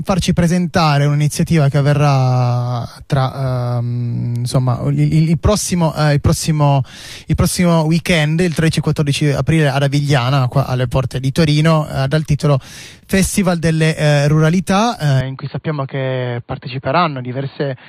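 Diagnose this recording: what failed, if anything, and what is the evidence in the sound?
From 15.21 s the sound turns dull and slightly quieter, cut off above 4.5 kHz: likely an input switched to a poorer device.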